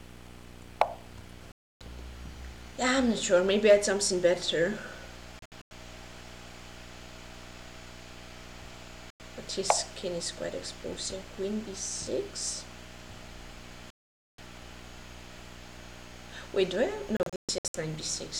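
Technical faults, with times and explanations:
Throughout: video or display buzz. A steady buzz at the 60 Hz field rate sits about 15 dB below the programme, with a band of hash above it. The hash comes from the sharp-edged pulses of the picture signal, which carry harmonics well up the spectrum. A screen or video cable is coupling its field-rate energy into the audio path, so the buzz never lets up, even during quiet passages.
1.52–1.81 s, 5.39–5.72 s, 9.10–9.20 s, 13.90–14.39 s and 17.17–17.75 s: digital broadcast dropout. At 1.52 s the sound mutes for 288 ms. At 9.10 s it mutes for 96 ms, and at 13.90 s for 480 ms. At 5.39 s it breaks into several short holes totalling 192 ms over 320 ms, the longest 96 ms. At 17.17 s the holes total 352 ms over 576 ms, the longest 128 ms. The hole lengths are multiples of 32 ms, which fits whole frames of that length being lost. The receiver lost the signal or rejected corrupted frames and muted until clean ones arrived, so the audio sent during each hole is gone.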